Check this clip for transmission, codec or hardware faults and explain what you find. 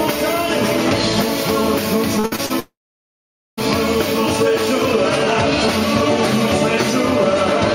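Two network faults sit back to back. From 2.19 to 2.52 s there is repeated packet loss, producing a robotic sound. Audio kept going missing in short bursts, the longest about 58 ms, and each hole was bridged by stretching the preceding sound. About half of this span is patched material, so the audio turns choppy and mechanical, with fragments dropped out.

From 2.60 to 3.59 s comes what sounds like a long network dropout, likely a stall in delivery. Nearly a second of audio never arrived. The last sound is briefly extended as a fading buzz or hiss, then roughly 0.85 s of silence follows before the audio resumes with that stretch missing.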